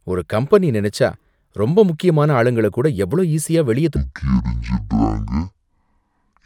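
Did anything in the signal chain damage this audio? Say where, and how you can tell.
Yes. From 3.96 s to the end of the speech at 6.45 s, a section at the wrong speed plays at half speed, so the audio turns slow and deep, dropping roughly ten semitones at the instant it starts. The likely cause is the playback or editing stage running that section against the wrong clock. Duration and pitch shift together, which rules out a pitch-shifter or time-stretch; either of those would change only one of them.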